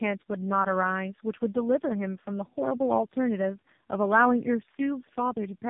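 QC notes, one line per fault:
throughout, tandem speech coding: the speech crossed about three separate speech coders, the last likely AMR-NB, each re-encoding the previous one's degraded output, so errors stack into rough, warbly, muffled speech with nothing above 3.5 kHz.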